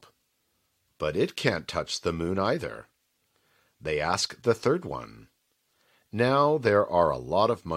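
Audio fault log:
4.25–4.27 s, overlap between stream segments: The speech jumps forward at one point, and a short click or tiny skip can be heard. About 20 ms of real sound is missing there. Two pieces of the stream claimed the same stretch of time, so the player trimmed the doubled part. That part was not actually repeated, so genuine speech was cut away. The waveform does not line up across the cut, which produces the click.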